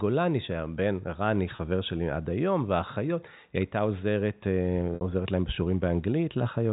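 At 1.56 s, 30 ms of packet loss with pitch repetition gives a brief buzzy hold. At 4.95 s, a 60 ms gap repeats, fades, then cross-fades back.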